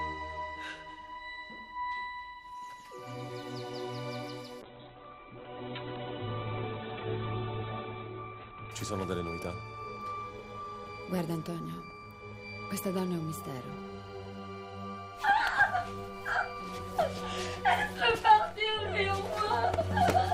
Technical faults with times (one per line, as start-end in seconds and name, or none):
4.63-8.79 call bitrate drop